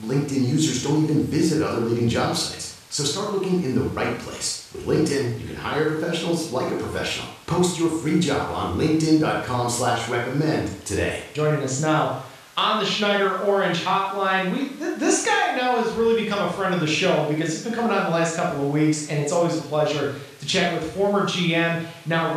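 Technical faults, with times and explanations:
Nothing technical stands out in this bit of speech; there's no fault to point to anywhere in it.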